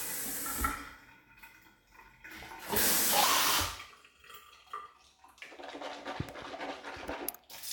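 At 3.24 s a section at the wrong speed begins and runs to the end at 7.72 s. The audio plays 1.31 times too fast. Pitch jumps about five semitones at once. Everything turns high and hurried. A playback clock mismatch is the likely cause.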